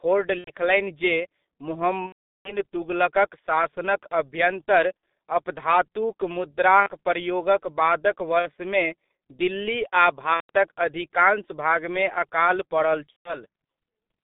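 It's a speech recording squeezed through the G.723.1 codec at 6.3 kbit/s, so everything sits in a narrow 200 Hz to 3.6 kHz telephone band. The low bitrate and sluggish voice modelling leave it heavily muffled and hoarse, with smeared consonants throughout. On top of that there's VoIP packet loss concealed by the speech codec at 0.38–0.51, 2.06–2.57, 4.97–5.03, 6.80–6.89, 8.39–8.50, 10.34–10.50 and 13.10–13.39 s. Each time, the decoder keeps extrapolating the last pitch and filter and fades the gain down, so you hear a buzzy or noisy stretched tail. The longest gap, about 390 ms, lands right before "तुगलकक शासनक अभ्यन्तर अपधातुक". There's another right after "दिल्ली आ", and the last one follows "अधिकांश भागमे अकाल पड़ल".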